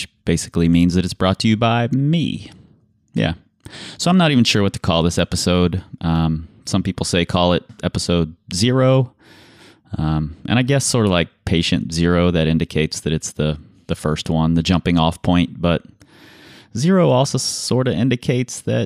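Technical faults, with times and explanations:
3.75 s, 5.19 s and 6.16 s: dropped samples. Three single sharp clicks, likely from a fraction of a millisecond going missing, so the waveform jumps abruptly to a later value.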